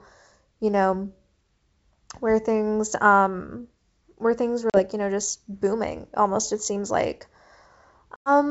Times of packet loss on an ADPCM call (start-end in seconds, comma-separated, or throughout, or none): 4.70-4.85, 8.16-8.31